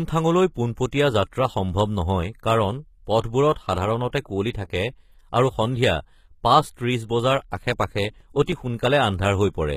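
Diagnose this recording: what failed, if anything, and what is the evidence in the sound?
Throughout the speech the treble sounds synthetic, with s sounds gritty or metallic. This points to the codec stage, likely HE-AAC at a low bitrate, rebuilding upper bands by copying lower ones.

Short hiss smears in just before attacks at 3.21, 3.53 and 4.51 s, lasting 33, 31 and 40 ms. This is pre-echo, codec quantisation noise spread across a transform block ahead of each onset.

Nine regular ticks run from 7.41 to 8.68 s, about seven per second, each a few milliseconds at most. These are CD scratch ticks from the storage and playback stage, with unreadable data interpolated or muted once per disc revolution.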